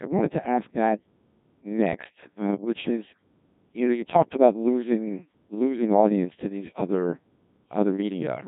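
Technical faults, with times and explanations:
Throughout, Codec 2 vocoder: the speech is heavily damaged, robotic and buzzy, because the decoder rebuilds it from sine waves using only pitch, voicing, energy and a coarse envelope, which fits a rate near 1.6 kbit/s. Unlike a waveform codec's smearing, nothing of the original waveform survives.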